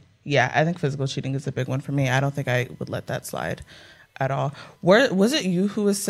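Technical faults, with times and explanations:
0.00–1.59 s, channel delay (comb filtering): one side lags by a couple of samples, so the mono sum notches out around 10 kHz, dulling the speech's top end.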